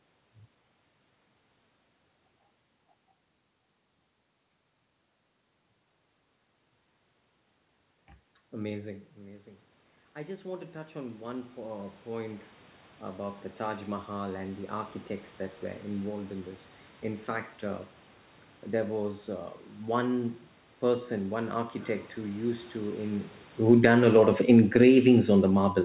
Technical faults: automatic gain rising; automatic gain falling

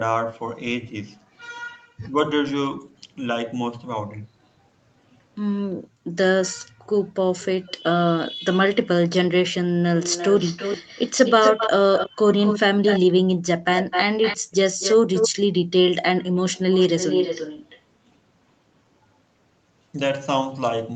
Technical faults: speech suppressed in double talk; echo leak; background gated by the echo canceller

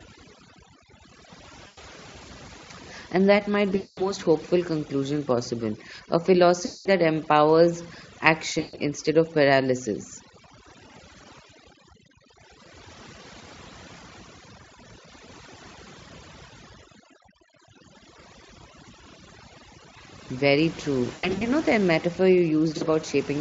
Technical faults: overdone noise removal; VoIP packet loss concealed by the speech codec

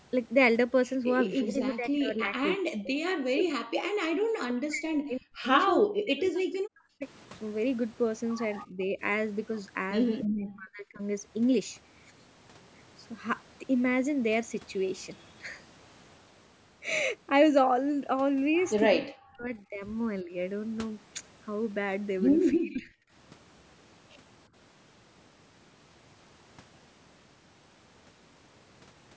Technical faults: speech suppressed in double talk

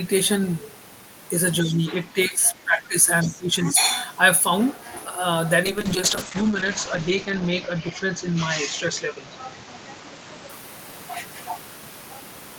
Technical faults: speech suppressed in double talk; other side's voice leaking through; call bitrate drop

